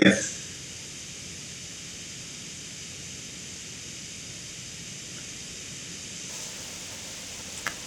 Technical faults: buffer tearing

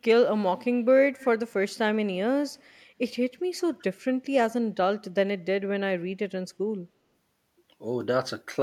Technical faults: echo leak

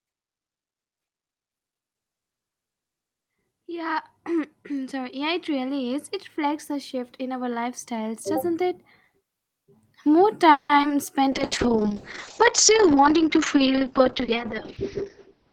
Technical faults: repeated packet loss (robotic sound); jitter buffer slow-down; call bitrate drop; jitter buffer speed-up

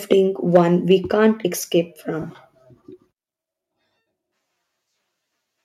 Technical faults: microphone overload; microphone volume stepped down; lost LE Audio frames

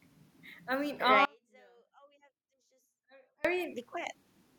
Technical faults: audio dropout to a faint residue

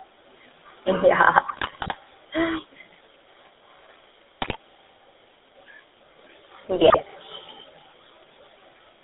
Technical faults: GSM full-rate codec; GSM bit errors

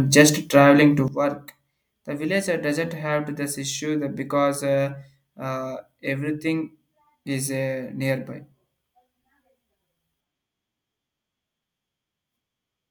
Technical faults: sudden gain jump

